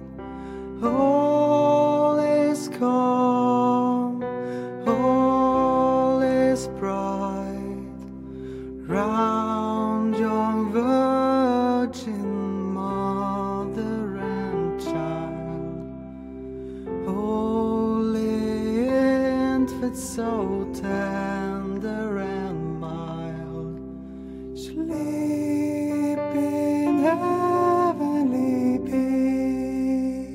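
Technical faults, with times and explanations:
No technical faults are audible anywhere in the audio.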